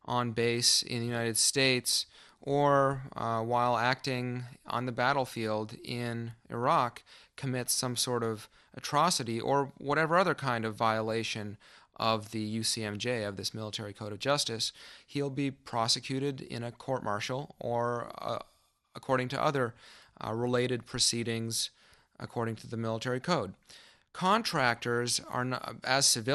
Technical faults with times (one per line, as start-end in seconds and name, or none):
0.00-26.35 MP2 compression